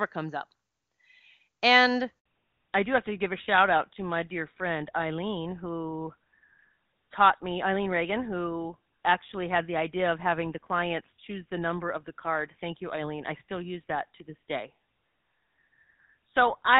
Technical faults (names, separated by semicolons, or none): handover gap; fallback to narrowband